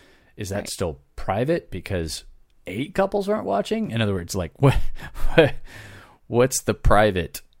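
At 3.87 s to 3.90 s the speech has a corrupt frame concealed by the decoder: damaged bits in the AAC stream were detected, and rather than play the garbage, the decoder substituted its own fill for that stretch. The damaged stretch is about 30 ms, which fits a single damaged frame.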